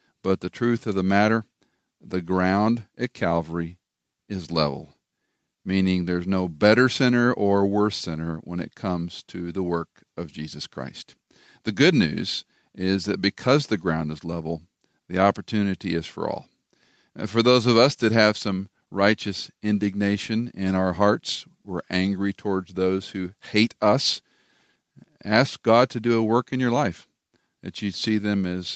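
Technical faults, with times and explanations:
No faults found; the speech carries only normal call-path processing, with the microphone high-pass trimming the lowest bass and the call codec band-limiting the audio at 8 kHz.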